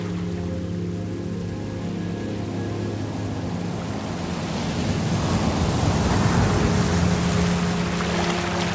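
No technical faults are audible.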